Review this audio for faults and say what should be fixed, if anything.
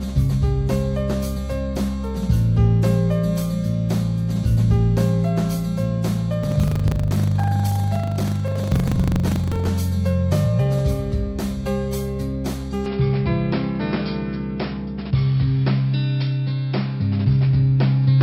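Buffer tearing runs from 6.4 to 9.71 s. A steady 25 Hz rattle rides the sound. A small slice of each buffer replays audio from slightly earlier, with hard joins.

From 12.86 s to the end, the sound turns dull and boxy. The band narrows, and new background noise sits about 45 dB below the signal. The level holds, with no gap. This is likely an input switched to a poorer device.

To prevent both, keep the audio writer ahead of the hardware read pointer and lock the recording input so the system cannot change devices mid-take.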